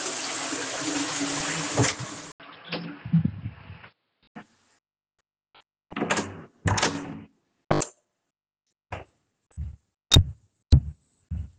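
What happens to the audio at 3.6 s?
From 2.32 to 4.35 s the audio turns dull, with nothing above 5.3 kHz, a faint new noise floor and an 80 ms gap: likely an input switched to a poorer device.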